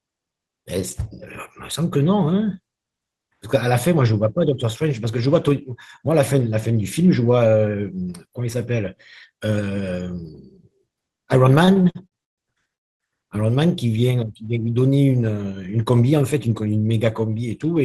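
From 11.65 to 12.72 s, repeated stalls (stutter) interrupt the speech. Packets arrived late, so playback stalled seven times. The receiver filled about 314 ms, up to 138 ms at once, and the speech drags and stutters.

At 12.75 s a call audio freeze follows. The sound hangs, then drops to near silence for about 250 ms before resuming at 13.03 s. Held-up packets emptying the jitter buffer are the likely cause.

From 16.02 to 16.67 s a jitter buffer speed-up runs the speech at 107% speed. The receiver trimmed about 50 ms of pitch periods, so the speech sounds hurried at unchanged pitch.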